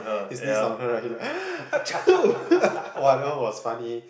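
From 0.89 to 3.39 s the speech picks up a feedback echo between two devices. Each bit of speech comes back roughly a fifth of a second later, thinner and ringier, peaking at about 14 dB below the speech itself. What's happening is that a second device in the same room is playing the call out loud, and this microphone hears it again. The echo canceller only knows about its own speaker, so it can't remove the repeat. The audio also tops out at 8 kHz, as you'd expect through call processing.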